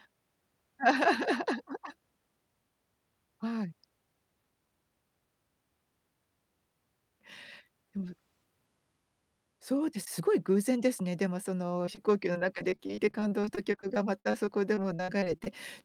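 From about 11.85 s to 15.48 s there's repeated packet loss, giving that robotic sound: a few dozen short holes, the longest around 52 ms, each patched by stretching the last sound. Around a fifth of that stretch is filler, so it turns choppy.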